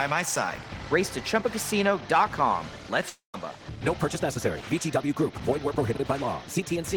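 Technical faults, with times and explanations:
3.09–3.35 s, long network dropout: the sound turns into a fading buzz, then about 130 ms of near silence, and resumes with roughly 200 ms of audio missing, likely from lost packets. A spectrogram shows smeared, decaying bands, then a blank gap, and the waveform tapers flat.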